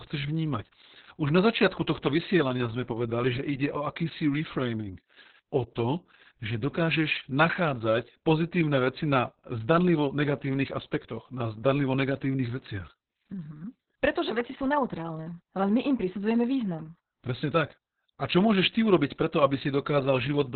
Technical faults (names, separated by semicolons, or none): Opus voice compression